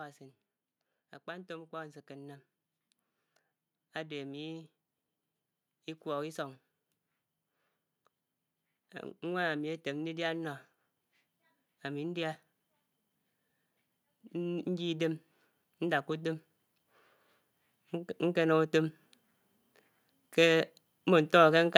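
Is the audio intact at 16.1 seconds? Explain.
No. At 16.1 seconds the clip is inside a stretch of automatic gain rising that runs from 14.3 to 16.42 s. The gain control judged the incoming level too low and kept turning its amplification up, adding about 4 dB over those two seconds. Because the boost acts on everything at once, the speech and the background noise beneath it swell together, the whole sound creeping louder rather than the voice itself getting stronger.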